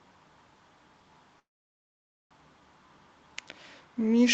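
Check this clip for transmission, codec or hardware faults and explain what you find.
There's one clear fault, a call audio freeze. From 1.39 to 2.34 s the speech stops for about 0.9 s, holding nearly silent, then resumes exactly where it left off with nothing lost. That's likely packets stalling in transit until the jitter buffer drained, with the receiver padding the wait.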